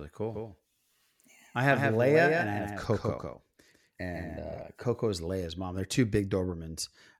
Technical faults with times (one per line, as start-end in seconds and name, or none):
0.34-4.62 doubled audio track